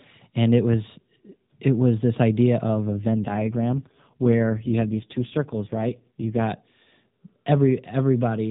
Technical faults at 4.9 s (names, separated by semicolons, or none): AMR rate drop